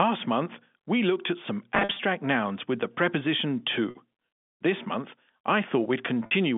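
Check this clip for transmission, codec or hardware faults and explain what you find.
Packet loss with pitch repetition is present, heard through the narrow 150 Hz to 3.5 kHz band of the G.711 line. From 1.75 to 1.99 s, about 160 ms goes missing in gaps scattered across 240 ms, the longest run 50 ms. Single 50 ms losses follow at 3.90 and 6.26 s. The receiver fills each gap by repeating the last pitch period, so the speech briefly holds on a slightly buzzy, frozen tone before resuming.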